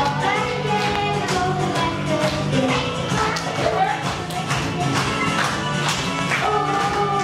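A loud pop hits from 0.96 to 0.98 s and again from 6.19 to 6.21 s, each a single sharp burst standing well above the surrounding level. The likely cause is a brief voltage pulse, such as static or a switching glitch, added into the signal path. Unlike a dropout click, nothing is missing: the sound continues unbroken beneath each pop rather than cutting out or skipping.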